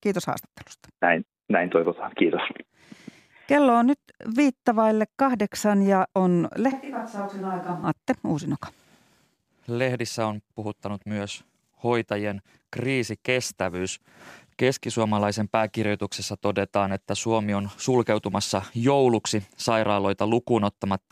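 From 6.72 to 7.83 s the speech abruptly turns hollow, thin and about 10 dB quieter. That's a switch to a distant microphone, likely because the close mic dropped out.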